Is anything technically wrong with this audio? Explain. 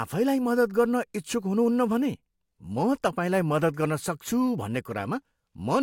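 No, nothing is technically wrong with this audio.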